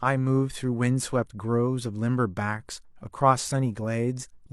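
No technical faults are audible anywhere in the speech.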